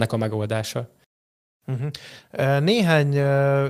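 Nothing stood out as technically wrong on listening to this speech recording.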